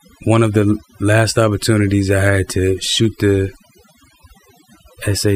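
A noise reduction stage set too aggressively runs across the whole recording, shutting down individual frequency bands near its noise estimate along with softer parts of the speech. This overdone noise removal leaves near-silent gaps sprinkled with twinkling specks.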